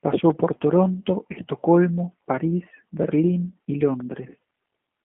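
Throughout the clip, the speech has passed through a G.729 codec, most likely the G.729A variant. Instead of storing the waveform, it rebuilds each 10 ms frame from a vocal tract filter, a pitch predictor and a handful of pulses, which fits an 8 kbit/s VoIP link. The line band runs from about 200 Hz to 3.4 kHz, so the voice is thin and muffled. The coarse excitation gives it a plainly audible rough, buzzy, synthetic quality.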